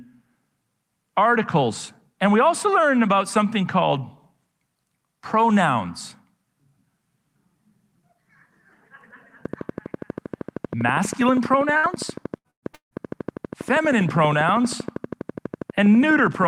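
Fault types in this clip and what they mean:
Train of clicks: steady ticking at 12.5 per second from 9.45 s onward, peaking about 10 dB over the speech, likely interference from nearby equipment.
Burst of packet loss: at 11.77, 12.38 and 12.50 s the sound briefly smears and fades, then resumes with 60 to 120 ms of speech skipped.
Long network dropout: at 12.74 s the sound fades into about 120 ms of silence, then returns with 180 ms missing, likely because no audio arrived.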